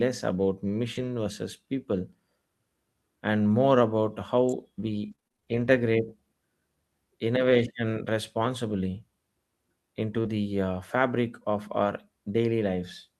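Speech clip with three faults. From 0.95 to 1.09 s, just before "versus people", there is a lost packet rebuilt from error correction. About 80 ms of audio comes from low-bitrate backup copies, so it sounds rough and noisy. At 4.49 to 4.52 s, right after "and more about", a sharp snap sits on top of the speech. This is likely an electrical switching spike picked up by the line. From 5.11 to 11.86 s there are scattered short gaps. About ten small holes, none longer than roughly 30 ms, are patched by extending the last sound. They cover a few percent of that stretch and cause brief ticks and smears.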